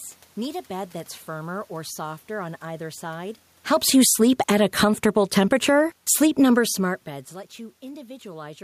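From 3.64 s to 7.23 s the automatic gain falls by about 6 dB as the control judges the input too loud or its background noise too strong and steadily pulls its gain down. What separates it from the talker's own movements near 3.5 and 6.5 s is that the room noise sinks along with the speech.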